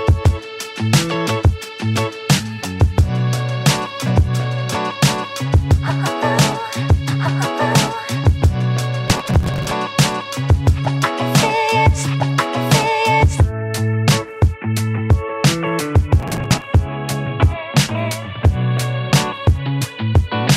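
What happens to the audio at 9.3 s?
The processor falls behind on its roughly 10 ms buffers and skips dozens of them, a processor overload crackle from 9.08 to 9.72 s heard as gritty, tearing crackle.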